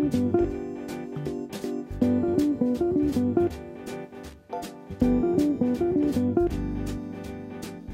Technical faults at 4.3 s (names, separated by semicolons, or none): loose connector crackle